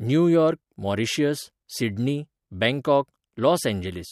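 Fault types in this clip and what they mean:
No faults can be heard anywhere in this speech.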